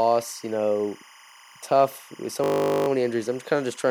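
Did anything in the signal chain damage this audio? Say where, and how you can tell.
Yes. Timecode bleed entered in the analogue wiring. A chirping warble near 1 and 2 kHz runs throughout, about 25 dB under the speech, from 25 fps code leaking across.

A system hang loop occurred at the driver or buffer stage. From 2.44 to 2.88 s, between "tough with so" and "many injuries I'm", a 20 ms piece repeats, buzzing at 50 Hz. Speech resumes with little or nothing missing.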